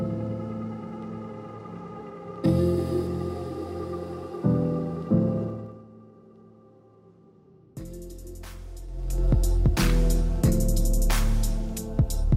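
At 5.42 to 5.88 s the level drops about 15 dB in 2 dB jumps, roughly twenty a second, and climbs back the same way at 8.86 to 9.28 s. That's zipper noise, a faint ticking over the fade.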